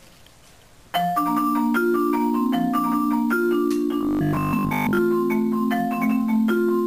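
From 4.01 to 4.99 s the audio takes on a robotic sound from repeated short buffers: a rigid, metallic buzz at 50 Hz that only loosely follows the original. The likely cause is new audio arriving too seldom, so the same short stretch, which fits a 20 ms buffer, is played again and again while the real audio is skipped. This covers most of that span. Unlike a plain dropout, there is no silence. The gap is filled with a steady buzz whose rate stays fixed.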